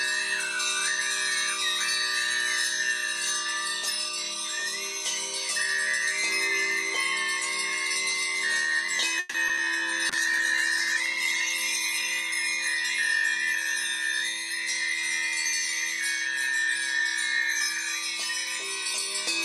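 From 9.19 to 9.59 s the sound turns choppy and robotic, with three gaps in quick succession. This is repeated packet loss: about 180 ms was patched by stretching the preceding sound, the longest hole lasting 150 ms, and roughly 40 ms simply drops out.

From 10.1 to 13.14 s the audio grows rough and muffled, with the top end thinned, then recovers. This is a call bitrate drop, which fits the encoder being pushed from about 64 kbps down to 13 kbps, its lowest point holding for about 1.2 s.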